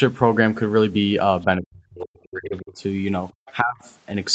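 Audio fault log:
1.58–2.82 s and 3.62–3.85 s: speech suppressed in double talk. With both sides talking at once, the echo canceller likely took the talker for loudspeaker echo and turned everything down. The speech sinks by up to about 40 dB across roughly a second, then about 25 dB briefly.
2.57–2.62 s and 3.30–3.53 s: other side's voice leaking through. Loudspeaker echo was likely not fully cancelled before reaching the microphone. Faint scraps of a second voice sit about 35 dB, then about 30 dB, below the talker, the first only a 50 ms blip.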